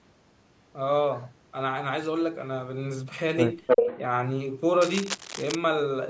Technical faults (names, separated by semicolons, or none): echo leak; cable scratch noise